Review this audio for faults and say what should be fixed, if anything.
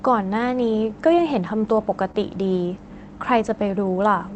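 At 1.19 to 1.21 s, a lost packet rebuilt from error correction leaves a brief patch that sounds rougher and grainier than the audio around it, with no gap. The stretch matches a single 20 ms frame. The next packet carried a low-bitrate duplicate of the missing one through Opus in-band forward error correction, and the decoder played that coarser copy in its place. The audio passes through a WebRTC call path whose response stops at 8 kHz, and the coding there runs at about 24 kbps, so the rebuilt frame adds more roughness to already modest detail. Reducing packet loss on the network path, or raising the bitrate so the redundant copy is coded with more bits, would prevent or soften this.

At 2.11 to 2.16 s, short concealed packet loss appears as a small smear or wobble. About 20 ms of audio failed to arrive in time. The receiver extended the preceding sound for roughly 21 ms, carrying its pitch or shaping noise to match, and then crossfaded back into the real signal, so whatever fell in that window was replaced by an estimate. 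A larger jitter buffer, or forward error correction able to cover this packet, would prevent the gap needing concealment.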